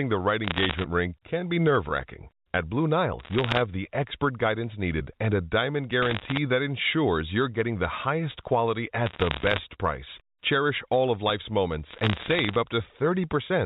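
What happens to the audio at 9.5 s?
At 9.5 s the speech is still inside a burst of bit errors on a digital phone line, running from 9.06 to 9.58 s, right after "getting the highest quality". On this G.711 A-law line, flipped bits each corrupt a single 8-bit sample. Hits on the sign or high-order bits throw that sample far off and produce sharp ticks. At an error rate of roughly one percent, they merge into a crackle layered over speech that stays unchanged underneath.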